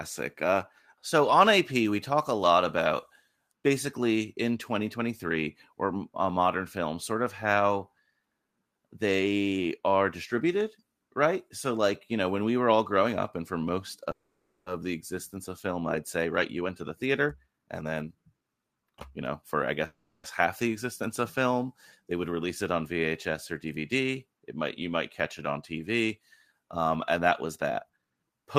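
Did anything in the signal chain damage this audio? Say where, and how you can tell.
Yes. A call audio freeze at 14.11–14.69 s, after "up and for most": the last sound hangs as a fading buzz, ending in a brief silence, then resumes with nothing lost. The same happens at 19.86–20.27 s, before "half the existence of", though without the silence. The likely cause is delayed network packets draining the jitter buffer.

A jitter buffer speed-up at 16.25–19.64 s, after "existence of film I'd", makes the speech run at 114% with unchanged pitch. A second one at 27.18–28.57 s runs at 116%. The receiver's buffer cuts repeated pitch-period slices, roughly half a second and about 0.2 s, to shed excess delay.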